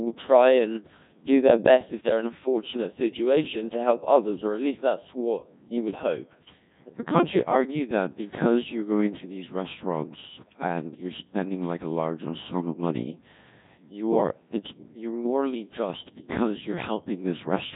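Throughout, the speech passes through a Codec 2 vocoder, heavily damaged and consistent with a rate near 1.6 kbit/s. It is resynthesised from sine waves, sounding robotic and buzzy, with nothing above 3.8 kHz.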